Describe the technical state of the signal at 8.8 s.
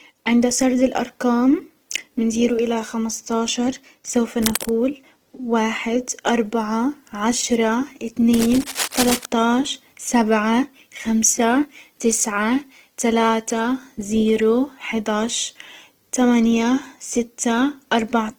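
At 8.8 s you're right in the middle of a burst of cable scratch noise that runs from about 8.33 to 9.25 s, starting just after "اربعة عشرة" and clearing just before "عشر سبعة خمسة تسعة". It sounds like scratchy, rustling bursts of noise laid over the speech. The noise sits only a few dB under the speech, so it's hard to miss. The likely cause is a worn cable, connector or control carrying DC being moved. Its contact resistance jumps around, and that injects dense, uneven noise into the signal.

Underneath that, the whole clip carries Opus compression damage, and it's plainly audible here too. The speech comes across noisy, rough and grainy. That's the signature of the music (CELT) mode, which fills bands it can't afford with folded-down content or noise. It leaves few holes, so it swirls less than MP3 would. The bandwidth stays full, reaching up to about 20.4 kHz. The grain fits a low bitrate of around 16 kbps, which is likely what's starving the encoder.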